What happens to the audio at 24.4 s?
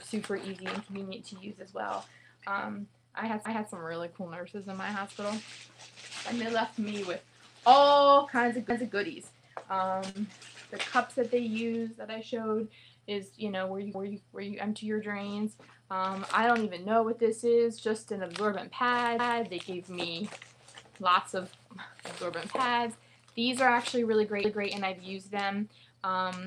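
Overlapping chunks at 24.44 to 24.70 s: a chunk starts before the previous 5-second chunk ends, so 250 ms plays twice, heard as a stutter at the join.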